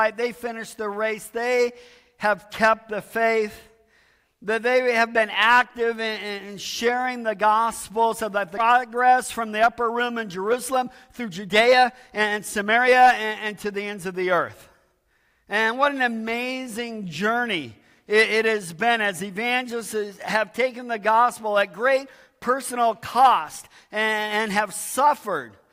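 At 8.57 to 8.59 s, a skip ahead occurs. About a second and a half of audio is dropped. Playback jumps forward with no gap.

From 8.67 to 14.39 s, a jitter buffer speed-up follows. Short pieces are removed repeatedly, about 0.7 s in total. The audio runs at 113% speed, same pitch, sounding hurried.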